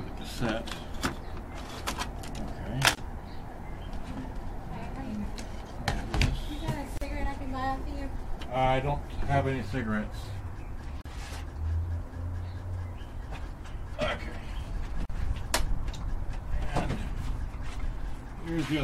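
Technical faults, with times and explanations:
2.95–2.97 s, 6.97–7.01 s, 11.01–11.06 s and 15.06–15.10 s: gap at a join of encoded pieces. Silence cuts into continuous sound every 4 s, 24 ms at first, then 40 ms. Separately encoded sections keep their encoder start delay and last-frame padding. Edges are smeared by the codec, and sound resumes where it stopped.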